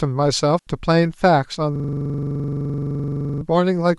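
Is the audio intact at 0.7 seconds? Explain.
Yes. A digital wireless dropout runs from 0.59 to 0.67 s, an 81 ms mute that ends just before 0.7 s. The receiver lost too much data, muted with a very short fade, and left a clean hole of near silence with no noise burst on either side.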